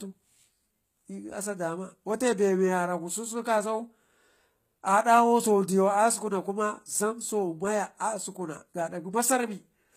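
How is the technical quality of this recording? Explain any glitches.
The recording is noticeably degraded by codec damage from start to finish. Throughout the speech, s sounds come out gritty and lispy, the treble has a metallic sheen, and nothing is heard above 14.9 kHz. This is likely HE-AAC compression at a low bitrate, around 20 kbps: only the lower spectrum is truly coded, and the treble is regenerated from copied lower bands, so its harmonics no longer match the original.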